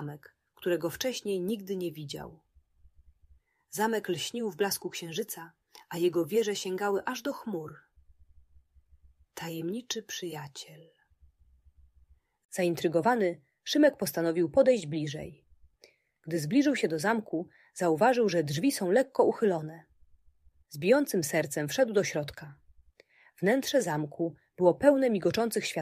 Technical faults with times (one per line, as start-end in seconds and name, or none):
none